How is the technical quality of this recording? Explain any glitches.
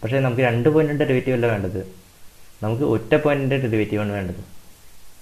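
No glitches are audible, with no dropouts, clicks, distortion or timing faults anywhere in the recording.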